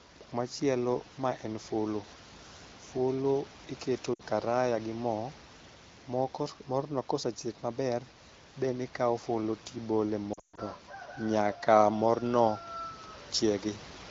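At 4.14 s, after "fulu iketo", lost AMR speech frames cause a drop to near silence. From 10.33 to 10.59 s, after "then ikawo fulu tibole", a longer run drops to near silence within two frames. Unlike a hard dropout, the decoder smears pitch with falling gain rather than cutting to silence.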